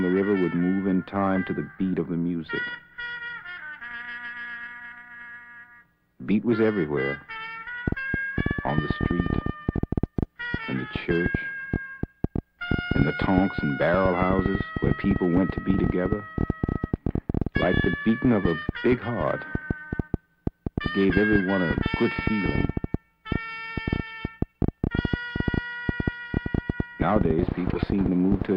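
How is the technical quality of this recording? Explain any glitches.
There's one real problem: a train of clicks that starts at 7.88 s and runs until 28.43 s, near the very end. It's a string of similar, sharp pulses arriving at an uneven pace, about 9.4 a second, so around two hundred in all, sitting roughly 20 dB above the sound. That's likely interference from nearby gear or a flaky connection or power supply injecting pulses, and you hear it as constant ticking and popping, right through the pauses too.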